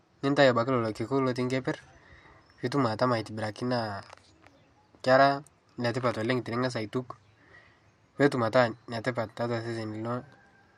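No technical faults can be heard anywhere in this speech recording, from its first moment to its last.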